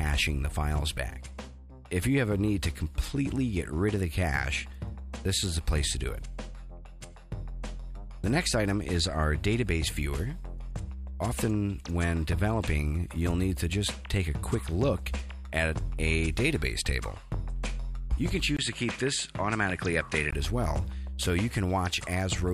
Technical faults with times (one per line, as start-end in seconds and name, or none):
18.57-20.33 input switched to a poorer device